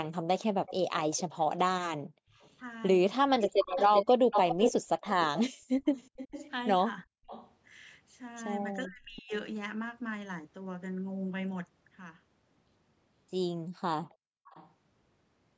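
Speech recorded through a call's microphone path, band-limited to nothing above 8 kHz, with three kinds of echo-canceller trouble. From 0.05 to 8.76 s there is an echo leak: a second copy of the voice trails the original by 383 ms, only a little quieter than the direct sound, so the speech sounds doubled and smeared. This is likely a far-end loudspeaker feeding back into a microphone whose canceller failed to subtract it. A much fainter leak, well below the talker, returns from 14.47 to 14.71 s with a 463 ms delay. The background is gated by the echo canceller three times, at 2.01 to 2.38 s, 5.52 to 7.27 s and 14.1 to 14.47 s. In each, the room sound drops by about 40 dB and then comes back. That pattern is the canceller clamping the microphone hard while the loudspeaker is active and releasing it afterwards. Speech suppressed in double talk shows up twice. At 3.39 to 3.46 s the voice dips slightly for a moment. 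At 8.86 to 9.32 s it almost vanishes for roughly half a second. Both fit the canceller turning the microphone down while the two sides talked over each other.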